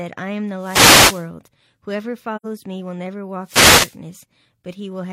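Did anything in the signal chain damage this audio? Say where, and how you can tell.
Yes. The wireless microphone stage, before anything was recorded, suffered two wireless microphone noise hits, from 0.57 to 1.29 s and from 3.42 to 3.98 s. In each, the analogue FM radio link faded as reflected paths cancelled the direct signal. With less carrier reaching the receiver, its own noise rose and spread over the speech. That is why each span sounds like a swish or burst of static laid over the voice rather than a gap.

The codec stage shows AAC frame loss with muting between 2.36 and 2.45 s. The decoder received nothing for that stretch and filled the missing frames with silence. Because AAC frames overlap, the sound tapers out and back in around the missing part instead of cutting off sharply. The result is a soft-edged hole of roughly 85 ms in the speech, which fits two consecutive lost frames.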